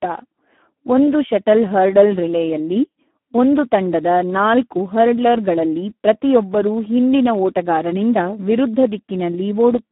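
Throughout the clip the speech sounds hoarse, buzzy and edging toward robotic, squeezed into a narrow band of roughly 200 Hz to 3.4 kHz with nothing above 3.8 kHz. This is heavy Speex codec damage: the artefacts point to a low setting around 8 kbps, which leaves too few bits to rebuild the excitation cleanly.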